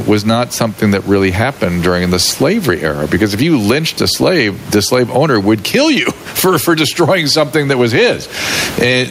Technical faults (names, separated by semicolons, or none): gain pumping